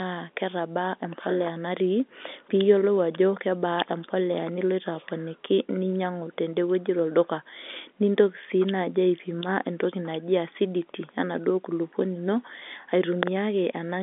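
Nothing here stands out as a fault; it's just ordinary phone-line speech from the G.711 telephone path, with the usual narrow band that runs out at about 3.7 kHz.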